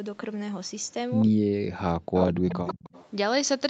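From 1.28 to 2.8 s the speech is pushed down by up to about 40 dB, dipping and breaking up across roughly one and a half seconds. This is speech suppressed in double talk, likely because the echo canceller attenuated both sides while both parties were talking at once.

Overlapping that stretch, from 2.16 to 2.31 s and again from 2.49 to 3.09 s, a delayed copy of the voice arrives 137 ms late and about 10 dB below the direct speech. This is echo leak, likely from loudspeaker pickup that the far-end canceller failed to remove.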